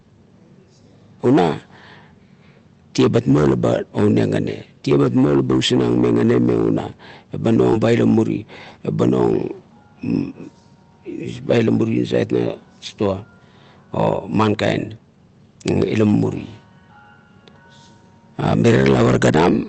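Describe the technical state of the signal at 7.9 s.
At 7.9 s the speech is inside a jitter buffer speed-up running from 7.87 to 8.80 s. The receiver trims short pitch-period slices, about 70 ms in total, so delivery runs 8% faster and sounds hurried. Unlike a resampling error, the pitch stays unchanged.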